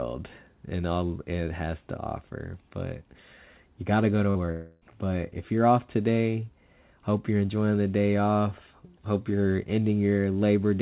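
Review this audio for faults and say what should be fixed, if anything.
A burst of packet loss hits at 4.30 to 4.39 s. About 40 ms of audio is gone. The receiver stretched the last sound for 48 ms, fading it out. It becomes a brief held buzz or hiss before the speech jumps ahead. A deeper jitter buffer with forward error correction would prevent this.

Short concealed packet loss follows at 4.46 to 4.50 s. About 20 ms never arrived in time. The decoder filled the hole by continuing the last sound, then blended back. It is heard as a quick smear or wobble. Redundant encoding of recent frames would prevent this.

A long network dropout runs from 4.52 to 4.83 s. About 300 ms of speech is lost. The concealment stretches the last sound for nearly the whole gap as a fading buzz or hiss. Speech then resumes further on. The likely cause is a stall in the network path. Monitoring the link and switching to a more stable connection would prevent this.

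The G.711 call path cuts everything above 4 kHz. This is normal for that codec.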